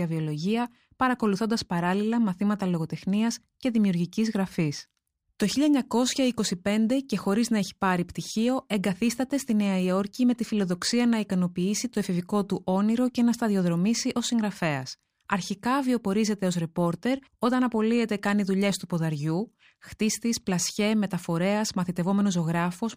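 All the way through this speech there's imaging from linear upsampling, which fits audio raised from 24 kHz to 44.1 kHz by joining samples with straight lines. That dulls the top end and leaves a mirrored image between 12 kHz and 24 kHz, roughly 30 dB down, heard as a metallic shimmer on sibilants.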